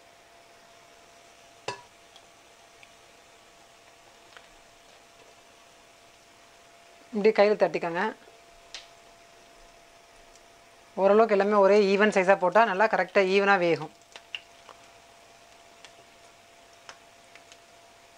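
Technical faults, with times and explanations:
Nothing stood out on listening to this clip.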